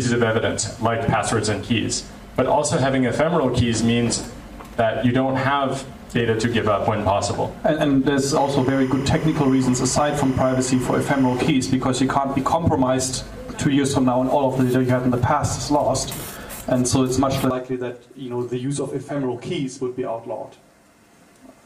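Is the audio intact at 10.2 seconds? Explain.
No. From 8.33 to 11.48 s, timecode bleed, linear timecode leaking from a neighbouring line at 25 frames per second, adds a chirping warble roughly 20 dB below the sound. A spectrogram shows energy flipping between bands near 1 kHz and 2 kHz, an octave apart.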